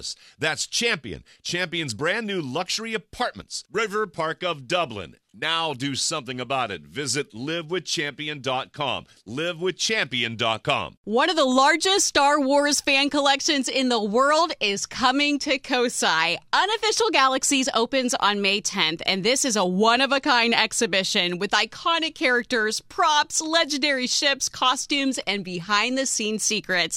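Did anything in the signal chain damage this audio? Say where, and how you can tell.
No, nothing along the chain from capture to playback shows audible damage in this audio.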